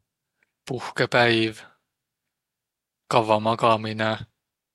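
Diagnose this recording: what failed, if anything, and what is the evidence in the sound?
Nothing failed; no faults found.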